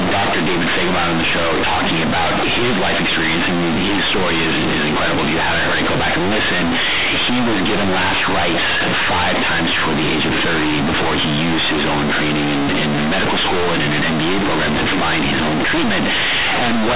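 From start to finish, the speech is companded audio read as linear. A-law bytes are played as plain 8-bit samples without expansion. Each sign change swings the output across half its range. Quiet sounds match loud ones. The result is harsh, buzzy distortion with heavy noise in pauses, over a 4 kHz telephone band.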